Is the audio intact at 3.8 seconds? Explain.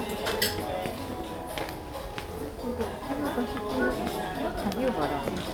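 Yes, the audio is intact at 3.8 seconds, with no fault audible at that moment.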